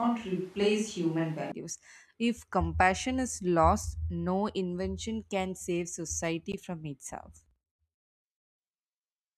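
From the opening to 1.52 s, the speech is already roomy and hollow, with thin low end and a background bed of room noise roughly 30 dB below the speech. This is the sound of a switch to a distant microphone: the close pickup's signal was likely missing for that stretch, so the recording falls back on a microphone further from the talker. The level stays about the same. At 1.52 s the sound snaps abruptly to the close, fuller character.

At 6.52 s, between "save society" and "from itself", a block of digital silence about 15 ms long drops into the signal. The sound cuts straight out and returns with no fade, so each edge is an instant discontinuity. At this length, the brief hole is heard as a short tick or dip rather than an audible gap.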